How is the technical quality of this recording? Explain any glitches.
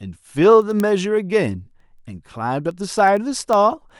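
The recording has a clear technical fault: word clock ticks run through almost the whole clip. From 0.16 s to 3.99 s, sharp ticks repeat at a steady rate of about ten per second, roughly forty in all. The sound comes over a digital link read by a device on its own clock, not locked to the sender. The two clocks differ by roughly 200 parts per million. Each time they slip past each other, one sample is dropped or repeated, and a tick results.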